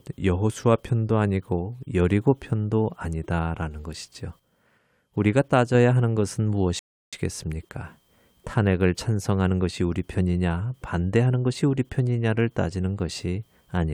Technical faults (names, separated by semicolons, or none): rebuffering stall